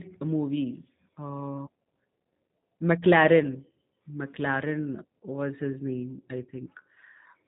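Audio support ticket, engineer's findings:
Speech rough, buzzy, slightly synthetic throughout; nothing heard above about 3.8 kHz. G.729 codec, likely the G.729A variant, consistent with an 8 kbit/s VoIP leg. Speech rebuilt from vocal tract filter, pitch predictor and sparse pulse excitation, so fine detail lost and highs cut.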